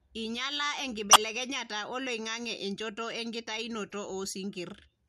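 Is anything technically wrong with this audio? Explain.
Yes. The speech has two short corrupt frame decoded events, at 1.11 to 1.16 s and at 3.89 to 3.94 s. In each, damaged bits in the compressed stream were decoded as if valid, so misread gains and codes placed energy at the wrong frequencies for the length of the bad frames. The first, a loud error reaching roughly -10 dBFS, points to a couple of frames. The second is a faint error near -40 dBFS spanning several short frames.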